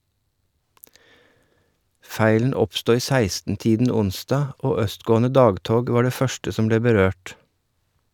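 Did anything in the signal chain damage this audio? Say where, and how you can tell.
No, nothing along the chain audibly damages this speech, so no stage needs attention.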